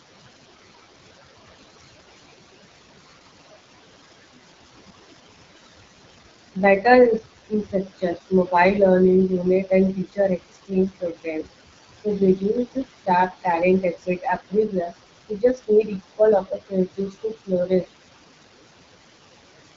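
The whole way through, the noise suppressor leaves artifacts: the room noise, which sits about 12 dB under the speech, gets pulled down by about 19 dB between phrases and swells back under them.

The AMR wideband (HD Voice) codec runs throughout as well. Nothing is above 7.5 kHz, and the rough, raspy edge on the speech points to one of the lowest AMR-WB rates, around 8.85 kbit/s, where the vocal model plainly struggles.

Then the noise suppressor starts cutting speech, mistaking it for noise, at 7.19–8.53 s (dips of up to about 17 dB), 9.29–11.48 s (about 21 dB), 12.75–13.46 s (about 13 dB), 13.82–14.93 s (about 19 dB) and 15.29–17.86 s (about 21 dB). Bits of syllables, adding up to somewhere from a brief moment to around a second per stretch, come out swallowed or faint.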